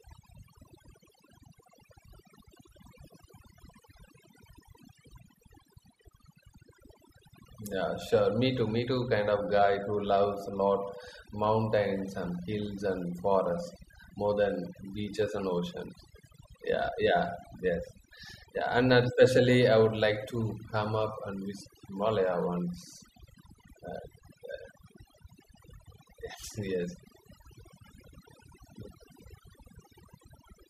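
Overdone noise removal runs through the whole of this speech recording. A noise reducer set too aggressively is cutting individual frequency bands that sit near its noise estimate, taking soft parts of the voice along, so the background in pauses drops and breaks up into flickering specks.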